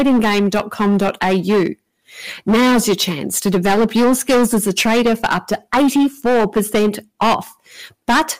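Hard clipping runs through the whole speech clip. The signal is driven about 17 dB beyond what the stage can pass, so roughly 15 percent of the samples are flattened at the ceiling. Those squared-off peaks add high harmonics, giving a constant harsh fuzz on every loud syllable.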